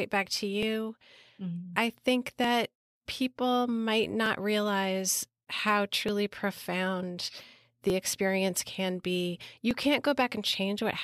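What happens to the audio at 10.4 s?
Nothing goes wrong at 10.4 s; the audio carries on intact through that moment, with no dropout, click or distortion.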